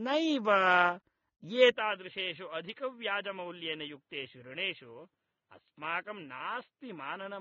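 Throughout the speech there is a smeared, warbling texture with dulled sibilants and nothing above 15.2 kHz, plainly audible codec damage that likely comes from AAC compression, consistent with AAC-LC at a low bitrate of around 24 kbps, where coarse quantisation of the frequency lines blurs detail. From 1.71 s to the end, with no gap at the change, the sound turns boxy and narrow, losing everything above 4.2 kHz, drops about 10 dB in level, and carries a faint new noise floor, likely because the input switched to a poorer device with a more limited frequency range.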